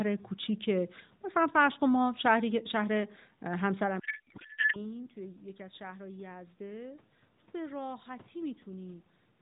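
A codec payload misread runs from 3.99 to 4.89 s in this speech clip. For just under a second the speech gives way to garbled, warbling noise that barely tracks it. The decoder is still getting valid-looking AMR frames but reading their fields from the wrong bit positions, which points to octet-aligned packing being parsed as bandwidth-efficient. Clean decoding returns once both ends agree on the format. The narrowband AMR sound, consistent with a 12.2 kbps mode, shows only light coding damage; the room noise belongs to the recording, and the level shift near 4 s is the talker moving, not the system.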